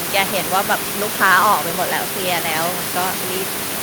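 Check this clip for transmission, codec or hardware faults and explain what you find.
Nothing in the transmission, codec or hardware chain stands out here; the only thing underneath the speech is the room's own background noise, sitting about 7 dB below it, which belongs to the recording itself.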